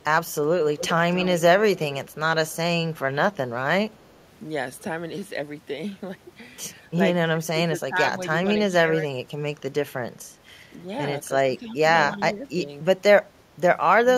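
Echo leak, from 0.77 to 1.41 s: a faint, delayed copy of the speech trails the original by 278 ms, sitting roughly 15 dB below it, so it sounds like a shadow trailing the speech. The likely cause is a loudspeaker on the far end whose echo canceller failed to strip out what its microphone picked up, letting that residue travel back down the line.

Speech suppressed in double talk, at 2.88 to 3.5 s, 7.3 to 8.88 s and 11.42 to 12.69 s: the talker's level sags and breaks up in patches. The first stretch loses around 15 dB over a few tenths of a second. The second is the worst, with drops near 20 dB spread across about a second. The third is milder, around 10 dB over half a second. This is likely an echo canceller that could not tell the local talker from loudspeaker echo while both sides spoke, and so turned everything down together.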